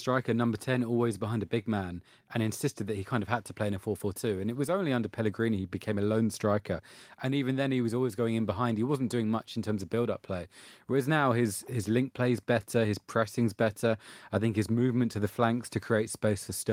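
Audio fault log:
Nothing to log here, as no technical faults turn up anywhere in this speech recording.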